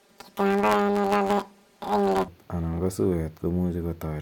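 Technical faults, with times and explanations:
0.00 to 2.29 s, planar audio read as interleaved: blocks of left samples followed by right samples are read as alternating pairs, so each 10 ms block plays twice at double speed. With blocks this short, the speech gets a robotic buzz at 100 Hz and no clear octave shift.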